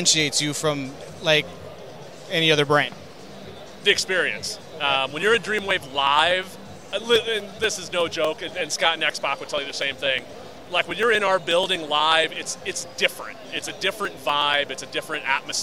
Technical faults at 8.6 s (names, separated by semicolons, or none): periodic USB or driver dropouts